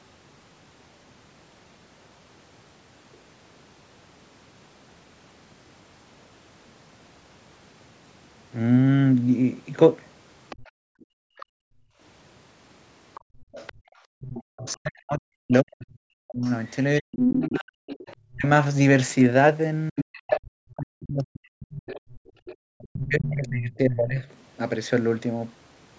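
From 10.5 to 11.45 s a faint second voice sits about 25 dB below the speech, likely the other side's voice leaking through after the echo canceller missed part of the loudspeaker signal. Between 10.63 and 14.21 s the background is gated by the echo canceller: room sound drops by up to about 40 dB, for roughly two seconds in total, then returns. The leakage recurs at 13.14 to 14.74 s, 16.44 to 18.16 s (only about 5 dB under the speech) and 19.98 to 23.49 s (about 10 dB under). From 14.57 to 24.24 s the speech is suppressed in double talk, dipping by up to about 40 dB over roughly seven seconds, as the canceller likely could not separate the talker from the echo.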